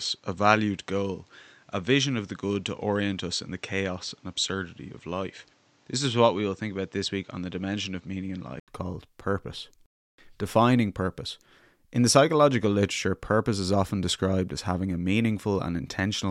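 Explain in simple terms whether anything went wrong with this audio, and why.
Input switched to a poorer device, from the start until 8.68 s: the speech sounds dull and muffled, with nothing above 8.2 kHz, slightly quieter and faintly noisier. After a brief 80 ms gap it clears up at "called purpose", likely because the recording moved to a better microphone.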